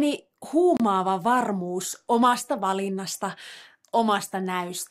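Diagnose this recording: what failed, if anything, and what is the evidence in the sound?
A playback-side dropout on the wireless link, most likely a Bluetooth stall. At 0.77 s the speech cuts to silence for 30 ms, resuming at 0.80 s just before "varmuus omasta valinnasta". On the waveform it appears as an abrupt flat gap with hard edges; a spectrogram shows a clean vertical blank band across all frequencies. Delayed radio packets left the headphone buffer empty, so output halted until the retransmitted audio arrived.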